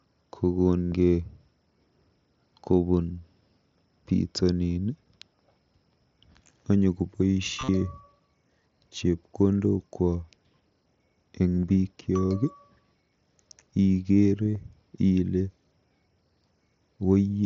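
Concealed Bluetooth headset packet loss occurs at 0.86–0.92 s, 7.59–7.69 s, 11.61–11.63 s and 14.46–14.57 s. Lost packets were filled by repeating recent waveform. This gives a brief buzzy, held tone, then a slight warble as real sound resumes.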